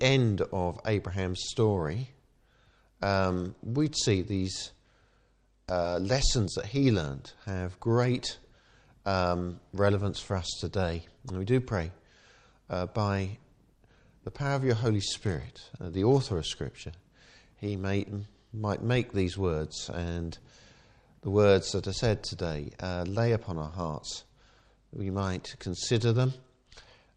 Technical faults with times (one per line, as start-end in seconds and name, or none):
3.29-6.08 Bluetooth SBC bit pool drop
14.97-16.57 Bluetooth SBC bit pool drop
24.65-27.17 Bluetooth SBC bit pool drop